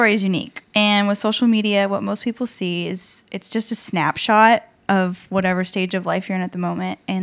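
No technical faults are audible.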